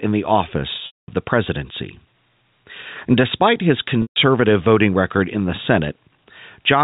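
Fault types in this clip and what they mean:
gain pumping: A fast limiter or compressor, likely fighting an input gain set far too high for the microphone, pulls the level down on each loud sound. The level swings by around 5 dB, leaving the sound squashed.
packet loss with pitch repetition: Runs of packets went missing, and the receiver filled each hole by repeating the last pitch period while fading it out. At 0.86 to 1.08 s (220 ms) and 4.02 to 4.16 s (140 ms), the sound turns briefly buzzy, dies to silence, then cross-fades back.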